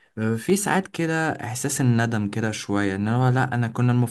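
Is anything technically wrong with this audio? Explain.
Yes. At 0.50 s there is a block of digital silence lasting about 0.67 ms, which fits a 32-sample block. The speech waveform drops abruptly to silence and returns with no fade, and a gap this short is heard as a tick or dip rather than as silence.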